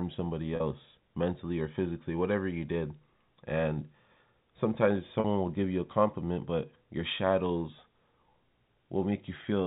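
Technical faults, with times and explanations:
0.56–0.60 s and 5.20–5.24 s, packet loss with pitch repetition: about 40 ms of audio went missing each time, which fits two 20 ms packets, and the receiver filled the gap by repeating the last pitch period, so the speech briefly holds on a slightly buzzy, sustained tone before resuming, heard over the band-limited G.711 telephone coding.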